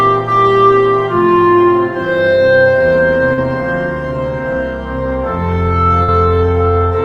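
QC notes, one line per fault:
3.33–3.39 s, short concealed packet loss: About 40 ms of audio failed to arrive in time, and the receiver synthesised roughly 40 ms to cover it by extending the preceding sound, following its periodicity where there was one and using spectrally shaped noise where there was not, then cross-fading back into the received signal. The result is a brief smear.
6.03–6.10 s, burst of packet loss: A run of audio went missing here, consistent with consecutive packets lost or arriving too late for playout. The receiver filled about 47 ms by continuing the last received sound and attenuating it across the gap, so it is heard as a held, fading tail instead of new material. Playback then resumes with about 40 ms of the original audio absent, which gives an audible skip forward at the resume point.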